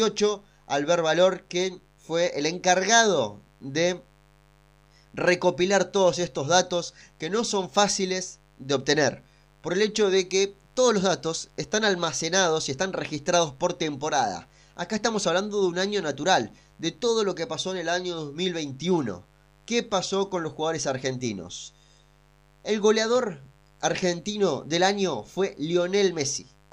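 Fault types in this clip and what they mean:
Mains buzz: a steady, raspy buzz sits under the speech for the whole clip, well below it at roughly 35 dB down but never letting up, even in the pauses. It comes from sharp electrical switching spikes, the sort a dimmer, rectifier or unshielded cable lets into the signal path, repeating twice per cycle of the 50 Hz supply, so the hum carries a dense ladder of 50 Hz harmonics reaching up into the kilohertz range.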